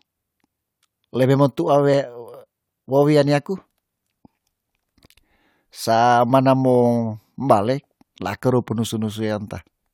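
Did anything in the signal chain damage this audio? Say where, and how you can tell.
No, nothing along the way seems to have hurt this recording; I can't hear any damage from any stage of the chain.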